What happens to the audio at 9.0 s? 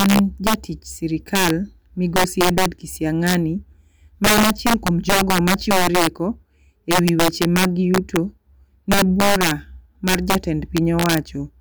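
At 9.0 s the speech carries the integer overflow fault that runs through the whole clip. The signal is driven about 7 dB past the integer ceiling, and instead of being held at the limit, the loudest peaks wrap round to the opposite extreme. Only a small share of samples, around two percent, cross over, so the damage lands on loud moments as harsh, violent cracks. Clipping would flatten those peaks into a duller buzz. Overflow throws them across the full range, which is why these cracks sound far sharper.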